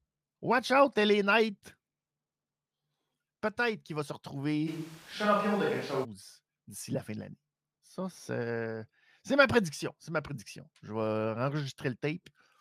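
A speech recording with a switch to a distant microphone from 4.69 to 6.03 s: the voice abruptly turns roomy and hollow with thinner bass, at much the same level, and background noise rises to roughly 25 dB below the speech. The likely cause is the close microphone's signal dropping out, leaving a farther pickup in use.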